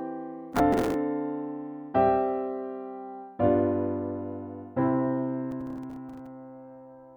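Processor overload crackle, from 0.53 to 0.94 s and again from 5.52 to 6.26 s: buffers of roughly 5 ms missed their deadlines, repeating stale audio with hard edges, heard as bursts of gritty crackle.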